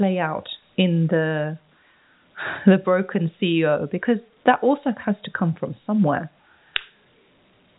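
No technical faults can be heard in the speech; it carries the narrow band of G.711 telephone coding, with nothing above about 3.8 kHz, which fits a 64 kbps A-law line.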